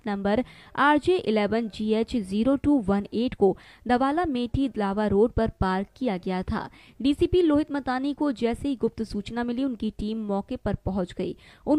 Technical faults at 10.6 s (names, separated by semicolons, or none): none